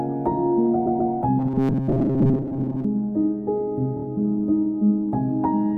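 Repeated frames appear from 0.85 to 1.11 s. A block of about 131 ms, consistent with five compressed frames, is played two extra times in a row, so that stretch of sound stutters and the audio runs about 261 ms longer than it should.

Robotic sound from repeated short buffers follows from 1.39 to 2.85 s. The sound hardens into a rigid, metallic buzz pitched at 134 Hz, while its overall shape is still loosely tracked. The likely cause is new audio arriving too seldom, with the playback software covering each gap by looping the last buffer of roughly 7.5 ms. For most of this passage the loops replace the real material, and their fixed repetition rate imposes that steady buzz.

Repeated frames return from 3.96 to 4.04 s, this time as a much shorter block of about 26 ms, consistent with a single frame. It plays three extra times, producing a quick stutter, and adds about 78 ms to the running time.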